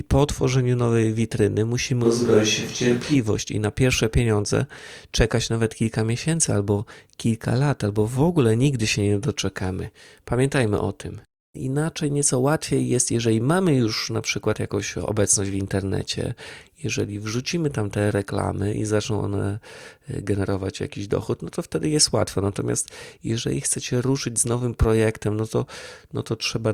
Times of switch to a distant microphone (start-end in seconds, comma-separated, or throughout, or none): 2.06-3.13